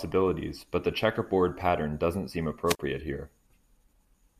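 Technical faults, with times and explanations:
2.66–2.79 s, wireless microphone squelch dropout: the radio link from the analogue FM transmitter faded, so the receiver's squelch shut its output rather than pass the rising noise. Hiss and static swell briefly, then the voice vanishes into a gap of near silence about 43 ms long before the signal recovers and the squelch reopens. The whole disturbance lasts roughly 0.14 s, a short stutter breaking the speech.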